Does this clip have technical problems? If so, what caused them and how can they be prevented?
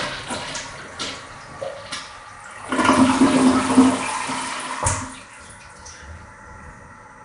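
Yes. Nellymoser compression throughout: rough, hissy, smeared sound with nothing above 10.6 kHz, likely from Nellymoser Asao coding with noise-filled bands, fitting roughly 44 kbps. Prevent it by recording with a modern codec such as Opus or AAC, or uncompressed.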